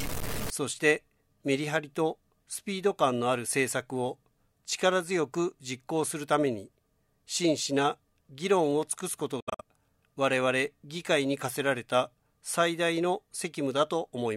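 From the start to 0.5 s the sound carries a distortion that tracks the waveform, and the quieter moments fill with a gritty noise floor instead of going clean. This is most likely a stuck bit: one bit of each sample is held at a fixed value, so about half the samples land off by that bit's weight. On a spectrogram the opening half second shows a broadband smear of hash above the normal content, and a zoomed waveform shows small, squared-off steps riding on the signal.

Between 9.40 and 9.61 s the sound breaks up into a cluster of silences, about 0.14 s of missing audio spread across roughly 0.19 s, with the longest single gap near 70 ms. When the sound returns, it has moved on, as though it kept playing through the holes. That pattern points to a likely Bluetooth dropout: packets failed to reach the headphones in time and were discarded. The waveform shows flat-line gaps, and the spectrogram shows narrow vertical blank stripes through every frequency.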